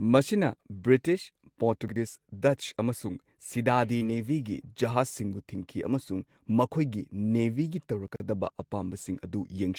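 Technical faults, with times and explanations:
1.88–1.96 s and 8.08–8.20 s, chunks out of order: a 40 ms chunk plays one chunk late in the first case and two chunks late in the second, so the speech jumps back and forth. On the waveform, three hard joins appear as sudden steps. The spectrogram shows broken formant tracks.
3.97–4.04 s, short concealed packet loss: about 40 ms of speech never arrived, and the receiver filled about 33 ms by extending the preceding sound before blending back, leaving a brief smear. The spectrogram shows a smooth, repeated harmonic or noise patch. The waveform shows a slight timing stretch.
4.01–4.20 s, lost packet rebuilt from error correction: about 100 ms was decoded from low-bitrate redundant copies, which fits five separate lost packets, so the speech turns rougher and grainier there. The spectrogram shows blurrier harmonics and a raised noise floor between them.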